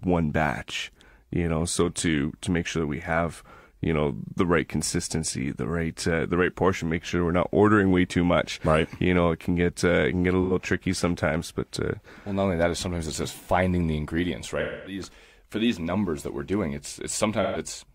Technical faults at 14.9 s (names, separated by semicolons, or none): AAC frame loss with concealment